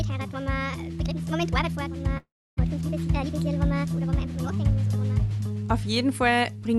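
At 2.17 s the sound breaks into a fading buzz that decays to near silence for about a third of a second, then resumes at 2.59 s with a gap in continuity. This is a long network dropout, likely lost packets concealed by the Opus call path.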